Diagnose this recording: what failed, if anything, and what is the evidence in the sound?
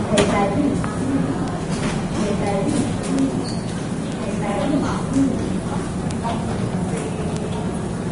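The codec stage most likely failed: the audio passed through Vorbis compression at a low setting. Nothing is present above about 10.6 kHz, and the remaining treble is coarsely quantised, so fine high-frequency detail turns into grainy, hissy noise of similar energy. Tones sound roughened and attacks smeared throughout the clip. The plainly audible codec damage points to a low bitrate, on the order of 32 kbps.

A separate fault occurs in storage or on a digital link: a bit error spike, where a flipped bit throws one sample, or a few in a row, off by a power of two before the value snaps back. Each is heard as a single sharp, broadband tick unrelated to the surrounding sound, at 1.48, 3.19, 4.12, 5.16, 6.11 and 7.37 s. Their isolated, instantaneous character rules out dropouts or buffer glitches.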